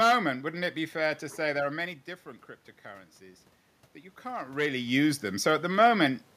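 From 3.18 to 5.52 s, automatic gain rising: the input having fallen about 12 dB, the gain control climbs about 6 dB, swelling voice and room noise together and regaining half the loss. The waveform envelope and spectrogram noise floor ramp up together.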